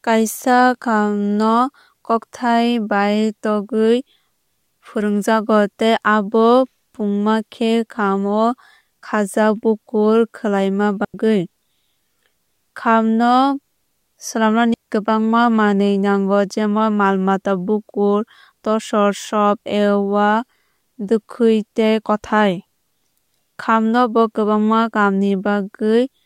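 At 11.05 s, just after "khajak bukur kwlwuima", the speech drops into a clean hole of near silence lasting about 96 ms; at 14.74 s a second hole of 120 ms ends right before "kwbangma manwui". Both are digital wireless dropouts: the receiver lost too much data, briefly muted with a very short fade, and left no noise burst on either side.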